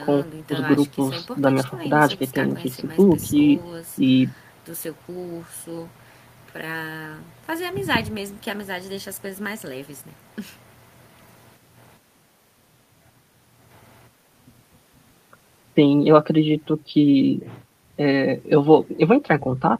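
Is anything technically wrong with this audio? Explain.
No, nothing technically wrong can be heard in this speech recording, and the signal holds steady throughout.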